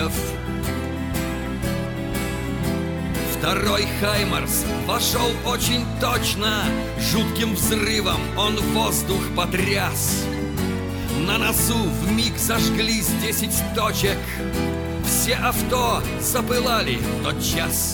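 No technical faults are audible.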